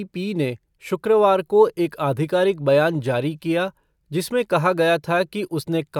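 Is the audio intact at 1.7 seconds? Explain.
Yes, the speech at 1.7 seconds is intact, with no audible fault at that moment.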